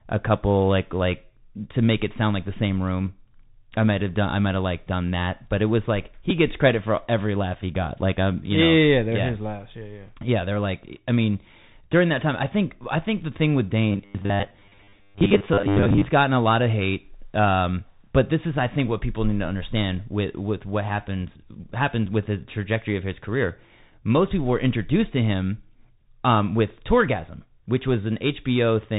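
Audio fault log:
Throughout: Bluetooth CVSD headset codec. The speech is band-limited with nothing above 4 kHz, and a granular hiss sits under it. The codec sends one bit per sample saying up or down, with an adaptive step size, which fits a 64 kbps headset link. Loud high-frequency sounds outrun the step and distort, so s sounds come out scratchy. The damage is plainly audible across the whole clip.
6.3 s: Bluetooth headset packet repeated. A brief tick falls between "but it was like" and "gets credit for every". About 7.5 ms of audio was lost on the headset link, which fits two dropped voice packets. The chip decoded the last good packet's bits again in their place. The repeat is too short to build into a buzz, so it is heard only as a tick.
13.92 to 16.06 s: robotic sound from repeated short buffers. The speech between "think the thing with" and "gotten a lot of" turns into a rigid metallic buzz at 100 Hz that loosely follows the speech. 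The likely cause is new audio arriving too seldom, so playback loops the last 10 ms segment to fill the gap. Roughly seven tenths of the audio in this stretch is repeated material, and the real audio is skipped. The fixed loop length forces the steady pitch.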